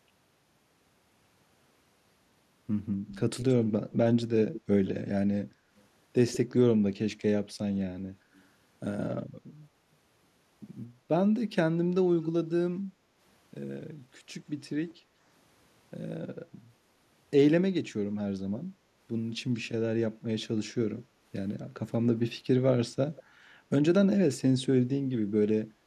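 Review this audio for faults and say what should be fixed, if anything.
A faint, delayed repeat of the speech trails the talker at 3.08 to 3.93 s, 4.53 to 4.9 s, 5.77 to 6.37 s, 8.34 s, 20.71 to 21.02 s and 23.16 s. It sits 175 to 201 ms behind the original, mostly about 15 to 25 dB down, and very faint at 8.34 s. This is likely echo leak: a far-end loudspeaker's sound got past that side's echo canceller and was sent back. Unlike room reverberation, which blurs into a smooth tail, this is a distinct second copy arriving after a fixed gap. It is best fixed at the far end with a headset, lower speaker volume or better echo-canceller tuning.

The room tone sinks by about 6 dB at 5.52 to 5.7 s and 12.91 to 13.18 s, for roughly a fifth and a third of a second, then recovers. This is background gated by the echo canceller, which pulled the microphone down while the loudspeaker played. Only the background dips here, whereas a packet loss dropout would leave a hole in everything. 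Gentler suppression settings, or removing the loudspeaker path with a headset, would prevent it.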